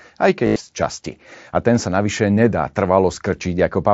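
Speech carried over an mSBC Bluetooth headset link suffers concealed Bluetooth headset packet loss from 0.45 to 0.56 s, just before "z časti". Nearly 0.1 s of lost frames, with one 90 ms run, were patched by repeating recent waveform, giving a buzzy held tone and a slight warble as the real speech resumes.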